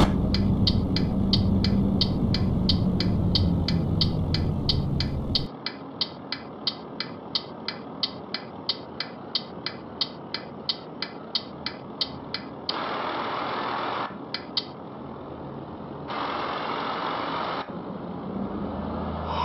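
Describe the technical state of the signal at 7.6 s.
At 7.6 s the sound is dull and band-limited, with nothing above 5.5 kHz. This state begins abruptly at 5.47 s, with no gap, and lasts to the end of the clip. The level falls by roughly 10 dB at that point. A faint new background noise appears, well below the signal. The likely cause is an input switched to a poorer device mid-recording. That replacement input passes a narrower band and brings its own lower gain and noise floor.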